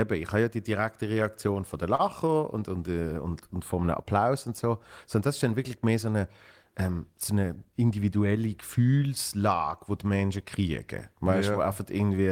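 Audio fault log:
1.95–2.01 s, short stall from a late packet: a packet missed its playout time and the jitter buffer emptied, so the receiver held the last sound for 36 ms, then resumed at the same point. Nothing is lost, but the speech hangs briefly with a faint buzz or dip.
7.49–7.73 s, jitter buffer speed-up: with excess audio queued, the receiver cut short pitch-period pieces in quick succession, about 40 ms in all, to bring the delay back down. The speech plays at 113% speed with unchanged pitch and sounds briefly hurried.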